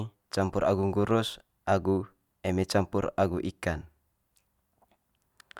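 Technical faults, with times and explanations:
No technical faults detected in the speech.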